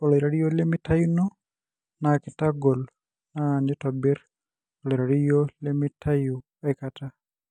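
Speech that opens on an adaptive stream starting at a low bitrate: until 6.0 s nothing reaches above 9.8 kHz and codec smearing is stronger, then the treble returns at once with no gap, which fits a step from about 32 to 96 kbit/s AAC rather than a rebuffering dropout.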